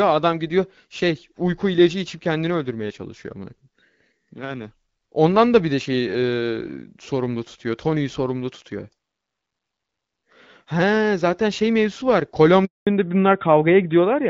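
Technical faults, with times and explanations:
12.65 to 12.87 s, handover gap: right after "zaten şey mevzusu var" the speech fades out within a few tens of milliseconds and then there's a flat 220 ms of nothing. That's the call being passed from one network to another, with no speech frames getting through while the switch happens, so whatever was said in that stretch is simply gone. Up to this point the HD Voice sound is clean, with only light codec colouring that fits AMR-WB at around 12.65 kbit/s.
12.87 s to the end, fallback to narrowband: once the speech comes back it's noticeably duller and a bit rougher, because nothing above 4 kHz survives. The new link evidently didn't keep HD Voice, and the call dropped to the older narrowband AMR codec, which sounds like its 12.2 kbit/s mode. That loses the top band the wideband codec had been carrying, so sibilants and the airy top of the voice go missing for the last second and a half or so.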